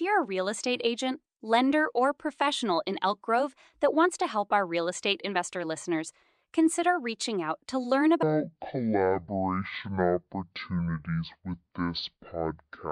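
From 8.23 s, right after "reaching out to learn", and running to the end of the speech, there is a section at the wrong speed. The audio plays at half speed, likely because that stretch was handled against the wrong clock. Pitch falls by roughly ten semitones while every syllable stretches to twice its length, so the speech turns deep and sluggish. A pure pitch-shift fault would lower the voice but keep its pacing. Here, timing and pitch change together.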